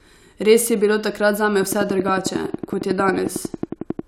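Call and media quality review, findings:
Train of clicks, 1.63 to 4.00 s, starting just after "je bilo takrat zame". Likely interference from nearby equipment or a struggling interface injecting a pulse 11 times a second. Heard as regular ticking, around thirty clicks, about 10 dB above the speech, audible in pauses too.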